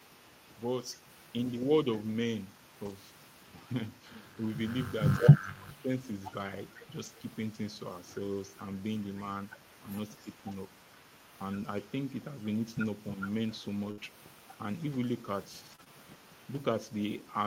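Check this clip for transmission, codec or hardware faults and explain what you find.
Four kinds of fault turn up in this speech clip: a faint echo for most of the clip, several rough patches rebuilt from error correction, brief dips in level, and a stretch of small hiccups late on.

Echo leak, from 0.00 to 3.53 s and again from 3.85 s to the end: a faint delayed copy of the talker trails about 310 ms behind, roughly 35 dB below the speech. Its likely cause is a far-end echo canceller failing to remove its loudspeaker's pickup, which returns down the line.

Lost packet rebuilt from error correction, at 1.93–1.95 s, 2.85–2.91 s, 7.01–7.07 s and 10.51–10.53 s: short grainy, noisy patches of 20 to 40 ms, with no gap. One or two packets each time were lost, and the decoder played the lower-quality copy carried in the following packet instead.

Speech suppressed in double talk, at 5.19–5.89 s, 9.83–9.89 s and 10.24–10.30 s: the talker's level sinks, deeply in the first spell (up to about 20 dB) and only slightly in the two short ones (about 5 dB). 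This likely comes from an echo canceller that could not tell near speech from echo while both sides spoke, so it turned everything down.

Scattered short gaps, between 13.91 and 15.88 s: around three brief hiccups and smears, the longest near 70 ms, covering about 5% of that stretch. Packets arrived late or went missing one at a time, and each hole was patched by stretching the preceding sound.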